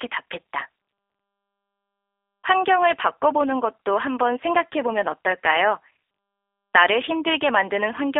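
Throughout the speech, the sound is narrow and boxy, confined to 300 Hz to 3.5 kHz, with a plainly audible rough, synthetic texture. This is G.729 codec damage: each frame is rebuilt from a vocal-tract filter, pitch predictor and sparse pulses, which fits 8 kbit/s G.729A.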